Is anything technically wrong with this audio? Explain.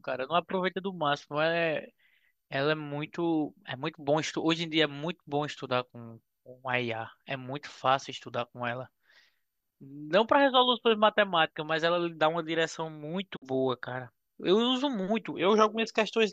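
Yes. At 13.35 to 13.44 s there is a digital broadcast dropout: the receiver lost valid frames and muted, so the speech fades out over about 20 ms and briefly disappears.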